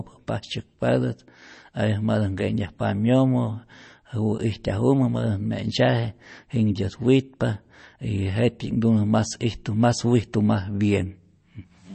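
From start to finish the speech carries plainly audible MP3 compression damage. Nothing is left above about 8.3 kHz, so the top of the sound is cut off cleanly and s sounds lose their edge. Weak frequency detail drops in and out between frames, giving a watery, swirly texture. The damage fits a low bitrate of around 32 kbps. At that rate the encoder likely ran short of bits and discarded what it judged least audible.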